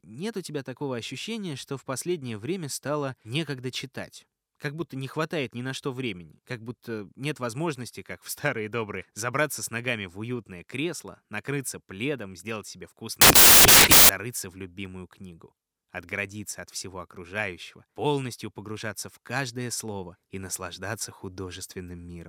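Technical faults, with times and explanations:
13.21–14.09 s, samples built from the wrong bytes: after "накрыться пледом сделать себе", the sample bytes are misassembled, so the fast-changing low bits dominate, producing broadband noise until "в любимую книгу отградиться".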